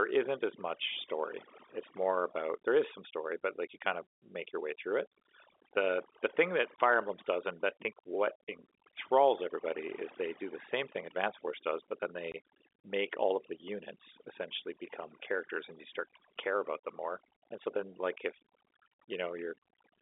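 From start to finish the speech carries overdone noise removal: a suppressor set too hard has pushed individual frequency bands near its noise estimate down to nothing, taking soft parts of the voice too. The background is near-silent with twinkling specks, unlike plain band-limiting.

At 6.76 s and again at 12.32 s there is packet loss filled with silence: a 20 ms hole each time, which fits one lost 20 ms packet. The edges are hard, so unlike a suppressor dip, the sound drops out completely and abruptly. The narrow 300 Hz to 3.6 kHz telephone band from G.711 coding comes through as expected.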